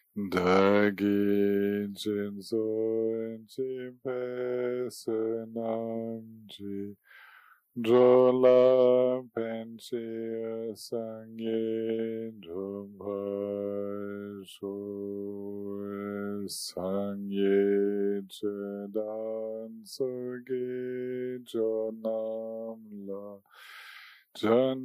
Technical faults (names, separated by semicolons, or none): none